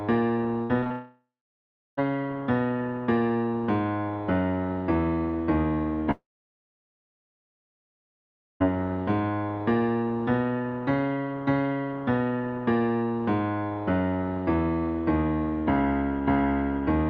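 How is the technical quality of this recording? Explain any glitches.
The recording has two network faults: a short burst of choppy, robotic sound and two long gaps where the audio disappears. The sound itself comes through a call codec whose upper limit sits around 8 kHz.

From 0.63 to 0.92 s there is repeated packet loss, which gives a robotic sound. Four separate holes open up within that span, the longest about 60 ms, and roughly 120 ms of audio is missing. Each hole is covered by stretching the last bit of sound, so nearly half of this span is patched rather than real. The result is a choppy, stuttering texture. What sets it apart from a dropout is that the real audio keeps returning between the short gaps.

Right after, from 0.92 to 1.99 s, comes what is likely a long network dropout. About a second of audio never arrives. The receiver briefly continues the last sound as a fading buzz, then falls to silence for about 0.7 s. 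A second, longer one runs from 6.11 to 8.62 s. It loses about 2.5 s, and nearly all of it is silent. Unlike the choppy stretch, the sound does not flicker back in pieces. It fades once and stays gone until normal audio resumes, with the missing part simply absent.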